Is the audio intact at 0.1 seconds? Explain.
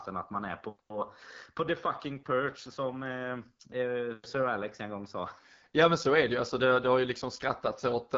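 No. At 0.1 s, as throughout the clip, the AMR wideband (HD Voice) codec is plainly audible. Its roughness and raspiness fit one of its two lowest modes, around 8.85 kbit/s, where the pulse-driven vocal tract model lacks bits. Nothing is present above 7.4 kHz.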